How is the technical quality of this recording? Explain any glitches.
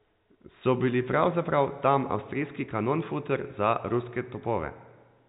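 No technical problems can be heard in the recording: the speech carries the narrow band of ordinary G.711 A-law telephone coding, with nothing above 4 kHz and only the faint quantisation noise that follows the signal's level.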